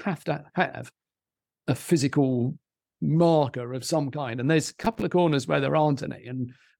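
From 4.64 to 5.02 s the processor falls behind and misses one buffer deadline after another, a case of processor overload crackle. The short gaps fit buffers of around 3 ms, and roughly thirty of them go unfilled, each left as a sliver of silence with abrupt edges. Strung together over those 0.38 s, the dropouts make a gritty, tearing crackle across the speech that clears just before "of corners where there".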